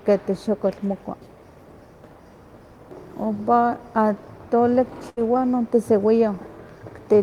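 Speech, with a burst of packet loss from 5.09 to 5.19 s. The last sound is drawn out into a fading buzz or hiss for 74 ms, then speech resumes with 80 ms skipped. Unlike a plain dropout, the gap is filled, not silent.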